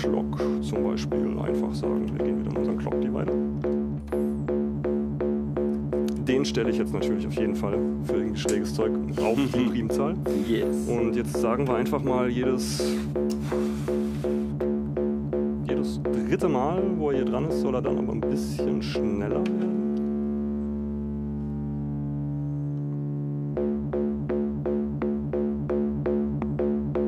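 No technical faults can be heard anywhere in the recording.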